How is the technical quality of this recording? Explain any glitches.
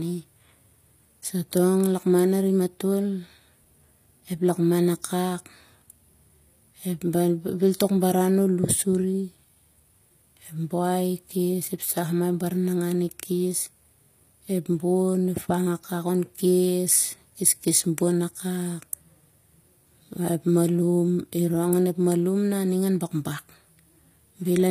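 The technical quality is compromised by plainly audible codec damage throughout. The treble sounds synthetic, with nothing above 15.5 kHz. S sounds turn gritty and lispy. The likely cause is HE-AAC compression. The codec keeps only the lower spectrum and rebuilds the top by copying lower bands upward. Those copied harmonics don't line up with the real ones, and the bitrate is a low 24 kbps.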